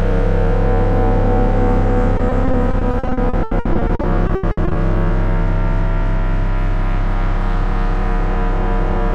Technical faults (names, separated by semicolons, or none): repeated packet loss (robotic sound)